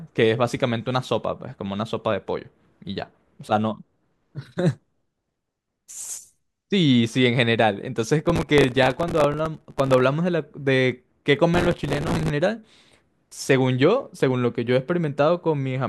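From 8.25 to 10.04 s the speech breaks into processor overload crackle. A second burst runs from 11.54 to 12.30 s. The processor misses its deadline for very short buffers, a few milliseconds each, many times in a row. Each miss replays a scrap of old audio with hard edges. Those splices stack into a gritty, tearing crackle over the voice. It stops when the load eases.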